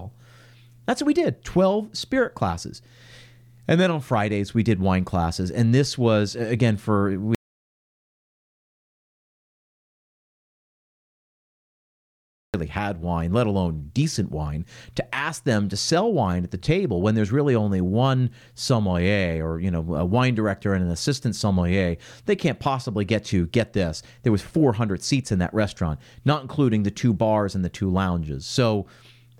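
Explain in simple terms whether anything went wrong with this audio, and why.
Something went wrong: the incoming sound was likely lost for a stretch, perhaps through a disconnected microphone, a broken link or an accidental mute, while the recording carried on writing nothing. This is an audio dropout to silence. Right after "this was again for", at 7.35 s, the speech cuts off into dead silence, with not even background hiss, until 12.54 s, when it resumes with "had wine let alone". About 5.2 seconds of speech are gone for good.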